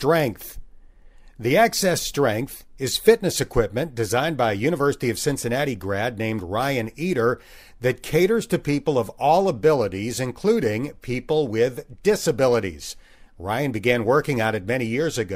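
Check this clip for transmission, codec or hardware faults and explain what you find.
No faults found anywhere in the speech; nothing to report.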